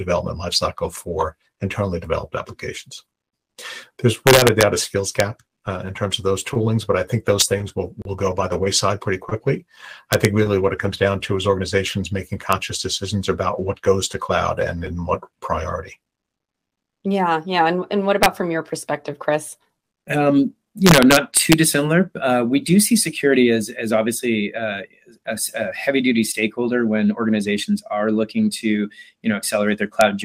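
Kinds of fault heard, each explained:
Integer overflow: Violent cracks at 4.27–4.63 s, 5.20 s, 7.41 s, 10.13–10.25 s, 12.53 s, 18.23–18.26 s, 20.87–21.53 s and 30.01 s. Loud peaks pushed up to about 2 dB past the integer limit wrap to the opposite sign instead of being held, snapping across the full range.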